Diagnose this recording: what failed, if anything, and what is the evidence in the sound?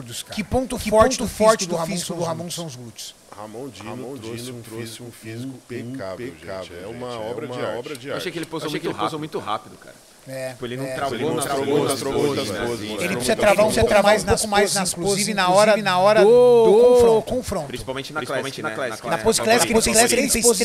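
A doubled audio track runs throughout: every sound returns about half a second later at roughly the same level, full-band, with no decay or room colouring, unlike a reverberant echo. The likely cause is the same signal captured twice through a slower second path.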